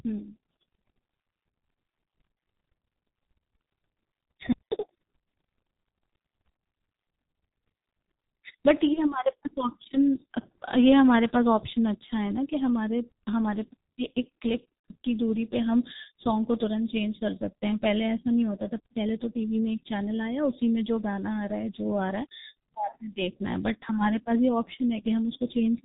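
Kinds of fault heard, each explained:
G.723.1 codec: Throughout, the speech sounds muffled and hoarse, with no content above 4 kHz and consonants smeared together. The codec damage is heavy. This is a low-rate telephony codec running at 6.3 kbit/s. It works in 30 ms frames and rebuilds the voice from a slowly updated model, so fine spectral detail and sharp onsets are thrown away in exchange for the tiny bitrate.
VoIP packet loss concealed by the speech codec: Brief buzzy or smeared patches appear at 3.56 s, 8.93 s and 14.79 s, where the voice dips instead of carrying on cleanly. Speech packets went missing, one 30 ms frame at each of the first two spots and two frames, 60 ms, at the third. The decoder filled each gap by extending its last pitch and filter with falling gain, and the effect lingers briefly after real data resumes.
Playback stall: From 4.52 to 4.72 s the speech simply cuts out mid-flow for about 0.19 s of silence, then picks up again. 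A gap like this, with no tonal fill and no gradual fade, points to the player running dry rather than to the codec. The likely cause is that its buffer emptied or its processing thread was held up, so it output nothing until data arrived.
Catch-up at higher speed: Immediately after the silence, from 4.72 to 4.91 s, the speech rushes along at double speed and jumps up in pitch by roughly ten semitones, giving a squeaky, chipmunk-like burst before returning to normal. The player was working off the backlog built up during the stall. It resampled the queued audio to play it twice as fast, which raises speed and pitch together and wins back part of the delay.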